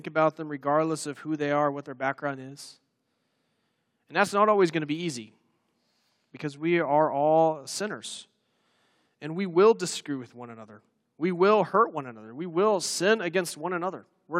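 No technical faults can be heard anywhere in the speech recording, and the signal holds steady throughout without any disturbance to its level, timing or continuity.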